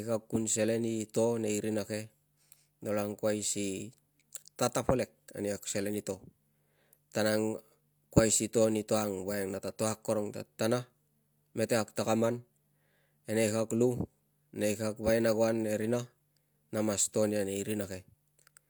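No technical faults can be heard anywhere here.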